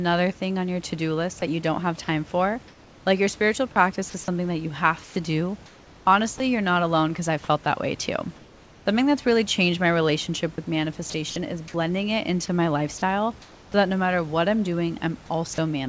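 This speech clip has its room background, about 27 dB below the speech, abruptly go flat and featureless in three pauses: 2.68 to 3.06 s after "don't have time for", 5.04 to 6.40 s between "is something that you" and "you're not alone because", and 8.36 to 8.86 s after "felt that way too", the first and last dropping about 2 dB. This is comfort noise in place of the background, likely from discontinuous transmission standing in synthetic noise for the real room sound. Right at 6.38 s, and again from 15.54 to 15.58 s, a sliver of sound vanishes into that steady hiss, sound dropped by the voice detector, which probably mistook the sound for background and stopped sending. From 11.10 to 11.36 s and 12.46 to 13.74 s the speech turns choppy, with holes where sound is replaced, sound chopped by the voice detector likely toggling transmission. Nothing is heard above 8 kHz, consistent with the wideband call codec.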